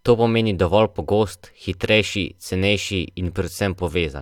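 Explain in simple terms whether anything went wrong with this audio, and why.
Nothing went wrong here.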